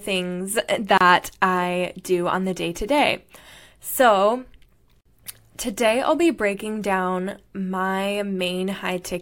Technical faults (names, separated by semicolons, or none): gap at a join of encoded pieces